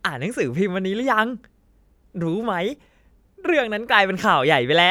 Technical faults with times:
none

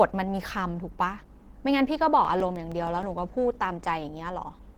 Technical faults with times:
0.00-4.78 Opus compression
2.09-3.18 CD scratch ticks

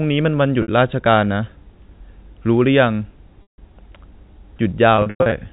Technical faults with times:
0.62-0.68 packet loss with pitch repetition
3.42-3.58 packet loss with pitch repetition
4.96-5.32 packet loss with pitch repetition

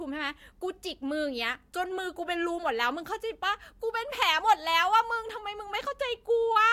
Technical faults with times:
none

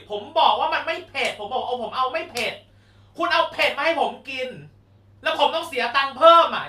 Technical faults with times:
none

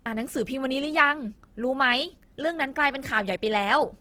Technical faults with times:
0.00-4.01 Opus compression

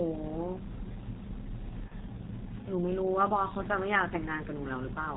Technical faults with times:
0.00-5.17 G.723.1 codec
1.88-1.94 VoIP packet loss concealed by the speech codec

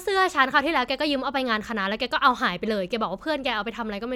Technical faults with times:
none

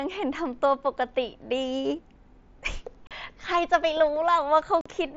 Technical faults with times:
3.07-3.11 unconcealed Bluetooth headset packet loss
4.81-4.86 unconcealed Bluetooth headset packet loss

